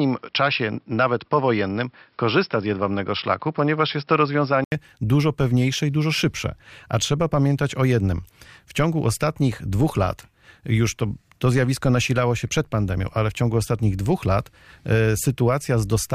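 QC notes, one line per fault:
0.00–4.72 s, input switched to a poorer device: the recording likely began on a narrower-band input before moving to the main microphone, with an 80 ms gap at the changeover. Until then the speech has nothing above 5.4 kHz, so it sounds dull and boxy, with a faint noise floor of its own sitting well below the speech. After the gap the full bandwidth returns while the level stays about the same.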